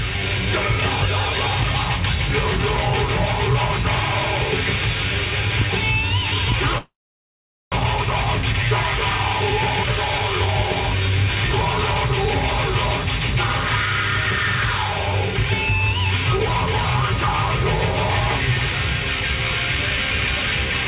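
At 6.78 s the sound smears into a brief fading buzz, then drops to silence until 7.76 s, and about 0.6 s of material never returns. This is a long network dropout, likely caused by packets that stopped arriving. The receiver stretched the last sound for a moment before giving up, and the rest of the gap stayed silent. When audio resumes it jumps forward past the lost part, leaving the playback running roughly a third of a second late.

From 7.84 s to 11.70 s the audio sounds slightly rushed, running about 8% fast while keeping its normal pitch. This is a jitter buffer speed-up. The late packets piled up in the buffer after the gap, so the receiver trimmed many tiny pitch-period slices in succession to catch up, removing around 0.3 s in total. Throughout, nothing sounds above 4 kHz, which fits a narrowband call codec.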